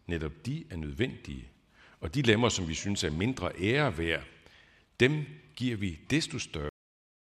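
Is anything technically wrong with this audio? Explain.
Yes. At 6.69 s the speech has a cut-off end: the final buffers never played, so it stops mid-sound into digital silence, a flat waveform and blank spectrogram with no decay tail.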